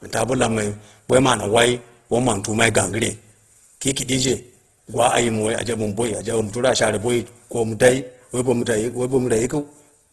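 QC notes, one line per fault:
Throughout, Opus compression: the speech sounds rough and grainy, with a noisy texture over its tonal parts and no content above 12.4 kHz. The likely cause is the Opus codec in its CELT music mode at a very low bitrate, around 12 kbps. Short of bits, it keeps each band's energy but fills the detail with folded or noise-like content. A spectrogram would show a hard ceiling at 12.4 kHz, with smeared, speckled harmonics below it.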